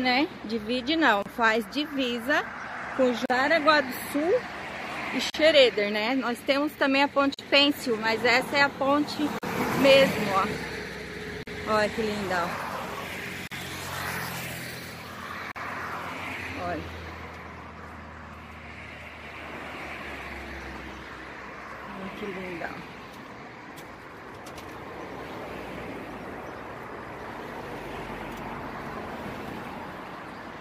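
Short silences cut into the audio at 1.22, 3.26, 5.30, 7.34, 9.39, 11.43, 13.47 and 15.52 s. These are gaps at joins of encoded pieces, one every 2 s, about 43 ms long after a first 31 ms one. Encoder delay and padding at each join were left in.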